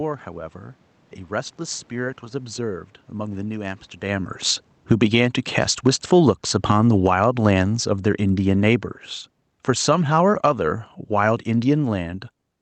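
From 4.03 to 5.21 s the automatic gain falls by about 11 dB after the talker moves around 4 s. Speech and room noise sink together, and the waveform envelope tapers over a second. Between 5.11 and 7.73 s automatic gain rising lifts both by about 3 dB, a gradual swell visible as a slowly widening waveform. Overlapping it, from 5.91 to 7.25 s, the gain falls again by about 9 dB. A last automatic gain fall of about 6 dB runs from 9.57 to 12.28 s. On a spectrogram, the whole band, cut off at 8 kHz by the Opus call path, dims uniformly, background included.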